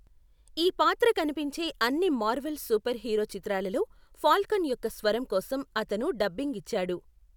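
No technical faults can be heard anywhere in the recording; the speech signal holds steady and intact throughout.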